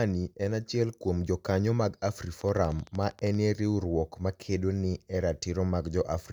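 From 2.41 to 3.35 s, between "achiel kuom jokaniyo mag" and "riwruok ma kedo ni", a steady ticking of about fifteen similar pops runs at 12.9 per second, peaking about 5 dB above the speech. This train of clicks likely comes from electrical interference or a faltering interface.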